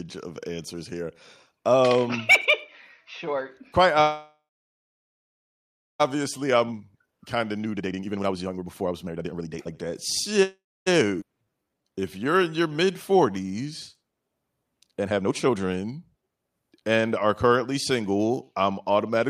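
A speech recording whose timing is repeatedly disturbed. From 4.01 to 6.02 s the last sound hangs on as a fading buzz, then about 1.6 s of silence, before the talk resumes where it stopped. This is a call audio freeze, likely from delayed packets draining the jitter buffer, and nothing is lost. A shorter freeze at 10.43 to 10.88 s does the same, with about 0.27 s of silence. From 6.21 to 9.86 s the speech rushes at 151% speed with unchanged pitch. This jitter buffer speed-up trims pitch periods to shed about 2 s of built-up delay. A milder speed-up at 138% runs from 15.05 to 16.44 s and removes about half a second. At 11.20 to 11.24 s the audio jumps abruptly forward, joined almost seamlessly. This skip ahead drops roughly a fifth of a second. From 11.38 to 13.34 s the speech drags slightly at 89% speed, stretched by repeated pitch periods. This is a jitter buffer slow-down adding 214 ms to rebuild reserve.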